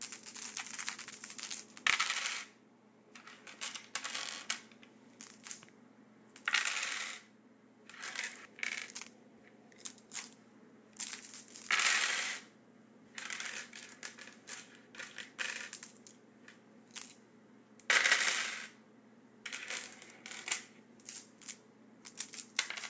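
From start to finish, the high end of these everyday sounds has a gritty, metallic edge, with unrelated tones that don't follow the real content and a spectrum that stays loud right up to 8 kHz before stopping dead. This is aliasing. The sample rate was cut, which fits a drop from 48 kHz to 16 kHz, without first removing everything above 8 kHz. That energy folded back below 8 kHz as false tones, and they are strong, not far below the sound itself.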